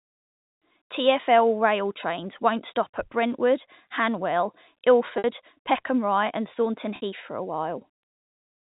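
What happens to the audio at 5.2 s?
Packet loss with pitch repetition from 5.18 to 5.24 s: about 60 ms went missing, bridged by looping the last pitch period into a brief buzzy hold that fades out. Unlike a plain dropout, it has no hard silent gap.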